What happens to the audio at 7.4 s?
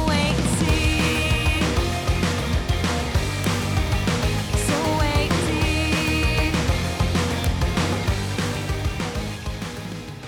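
At 7.44 s a sharp, loud click sounds where a file header was played as audio: a joined piece kept its few dozen header bytes, which play back as raw samples. A waveform shows a brief spike, and a spectrogram a thin full-height vertical line.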